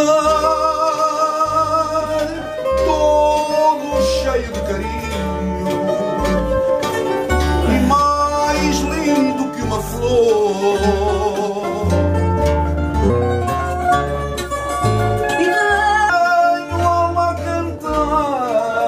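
Audio with a section at the wrong speed from 13.10 to 16.10 s, running 1.22 times fast and about three semitones sharp, likely from resampling against a mismatched clock.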